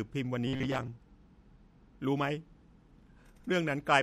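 Right from the start the speech sounds watery and swirly, with the treble cut and hissy s sounds chirping, likely MP3 compression at a low bitrate around 64 kbps. From 0.47 to 0.89 s the voice becomes a rigid metallic buzz at 134 Hz, robotic sound from repeated short buffers: it likely comes from roughly 7.5 ms chunks looping over about half the audio.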